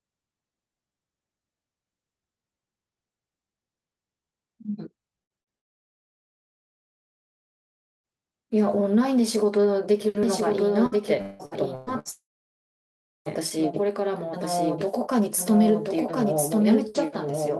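Speech clip carried over a call path, with a top end limited near 12 kHz and the coding noise of a call codec, consistent with Opus at around 32 kbps. Two bursts of packet loss come first, at 5.23 to 5.32 s and 5.41 to 5.49 s. In each, roughly 60 ms of audio never arrives. The receiver continues the last sound and fades it before the speech picks up further on with a chunk missing. Immediately after, from 5.58 to 8.06 s, there is a long network dropout. The concealment tail collapses almost at once and about 2.45 s of silence follows. The signal returns at 8.06 s with nearly 2.5 s of speech gone, the pattern of a likely interruption in packet delivery rather than a pause in the talker. From 10.23 s to the end a doubled audio track is present. A full-band copy of the speech trails the original by roughly a second at about 5 dB lower level, with no reverberant tail or room colouring. It switches in abruptly, which points to a likely second capture path or a misaligned edit holding two copies. 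Within that stretch, 10.86 to 12.08 s shows repeated packet loss with a robotic sound. Five holes, the longest about 0.18 s, are each patched by extending the previous sound, so close to 40% of the span is synthetic fill. The result is choppy speech with fragments missing. A second long network dropout follows at 12.11 to 13.28 s. After a short concealed tail, roughly 1.04 s of silence remains and about 1.14 s of material is lost before audio resumes, again most likely a stall in packet arrival.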